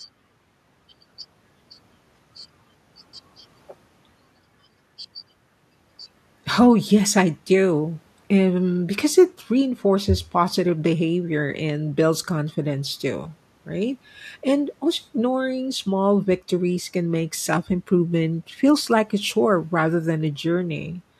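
A straightforward speech recording, and nothing technically wrong turns up anywhere in it.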